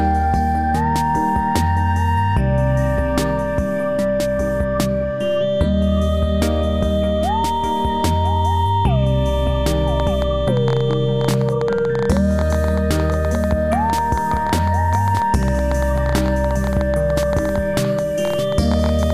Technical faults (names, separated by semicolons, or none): train of clicks